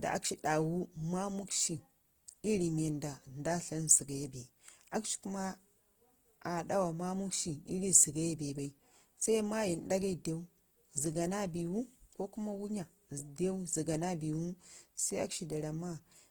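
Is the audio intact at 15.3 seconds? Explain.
No, at 15.3 s the speech has the grainy, rough, noise-filled texture it carries throughout, likely Opus compression in music mode at a low bitrate around 16 kbps, filling starved bands with folded or noisy content.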